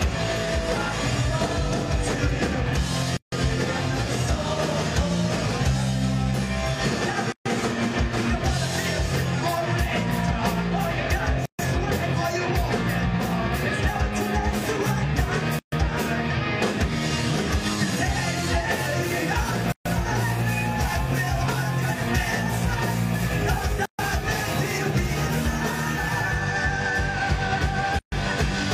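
Gaps at joins of encoded pieces open at 3.17 s (about 154 ms), then 7.32, 11.46, 15.59, 19.72, 23.86 and 27.99 s (133 ms each), roughly every 4 s. Separately encoded chunks kept their start delay and end padding. Each gap is a short dropout; a waveform shows flat silence with smeared edges, and a spectrogram shows empty vertical bands.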